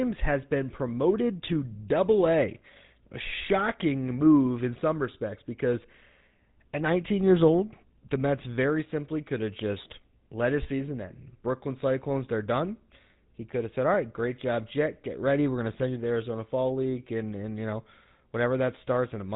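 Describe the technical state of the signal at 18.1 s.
At 18.1 s, as across the whole recording, the speech has passed through the GSM full-rate codec, and the coarse, heavily compressed coding fits its 13 kbps rate. The codec rebuilds the voice from a vocal-tract model driven by a sparse train of regularly spaced excitation pulses, so the speech takes on a plainly audible buzzy, gravelly roughness. Nothing survives above 3.8 kHz, which leaves the sound dull and telephone-like.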